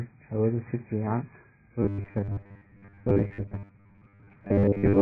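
From the start the speech is dull and smeared, with a lowered top end and a warbly, fizzy edge on sibilants. That's likely heavy AAC compression at a very low bitrate, where the encoder drops the top band and starves the rest of bits.

At 1.82 s the sound turns into a rigid, metallic buzz at 100 Hz that lasts to the end. This is robotic sound from repeated short buffers, likely caused by software replaying the last stretch of audio, which fits a 10 ms buffer, while most of the real signal is skipped.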